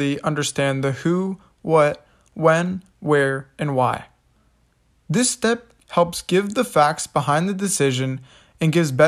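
No technical faults can be heard anywhere in the speech. Nothing in it calls for a timestamp or an explanation of a cause.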